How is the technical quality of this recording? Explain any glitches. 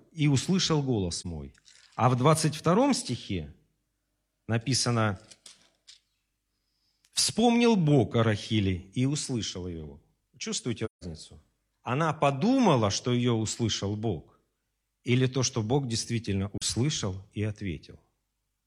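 The speech has three dropouts from AAC frame loss with muting. Whole coded frames went missing, and the decoder filled them with silence. The overlapping windows then faded the sound out and back in, leaving soft-edged holes. The first, at 1.18 to 1.26 s between "и услышал" and "мой а в", and the last, at 16.58 to 16.63 s, each fit a single frame of roughly 43 ms. The middle gap, from 10.85 to 11.04 s, is longer, consistent with several consecutive frames lost.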